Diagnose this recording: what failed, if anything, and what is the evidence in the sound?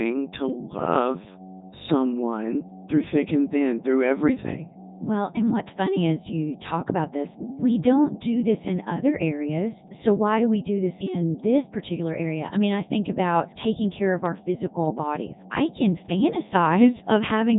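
Mains hum runs through the whole recording, a steady low tone at 50 Hz under the speech. It sits fairly high, only about 15 dB below the signal. The failure is in the analogue wiring. A ground loop or a nearby transformer is coupling the power line into the signal path before conversion. Nothing later in the chain removed it.

The Codec 2 vocoder stage has done heavy damage from start to finish. The speech sounds robotic and buzzy. Nothing is present above 3.8 kHz. This is a codec fault. Codec 2 sends only pitch, voicing, energy and a spectral envelope, then rebuilds the voice from sine waves, so the original waveform is lost. The quality points to its highest rate, around 3.2 kbit/s.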